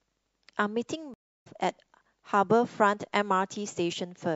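Throughout the speech, the sound is watery and swirly, with dulled treble and smeared consonants. The likely cause is MP3 compression at a low bitrate, which fits about 64 kbps. Starved of bits, the encoder drops quiet detail that flickers between frames.

At 1.14 s, a stream reconnect occurs. The audio stops for 316 ms and returns at 1.47 s. The connection dropped and a fresh decoder restarted mid-stream. The speech resumes roughly 0.4 s further on, so a short stretch is skipped.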